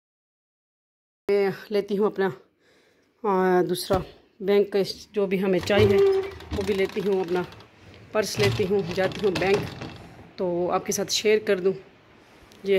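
From 0 to 1.29 s there is digital silence, then the audio enters abruptly at 1.29 s partway through a sound. This is a cut-off start: capture or streaming began late, so the onset has no natural attack or fade-in.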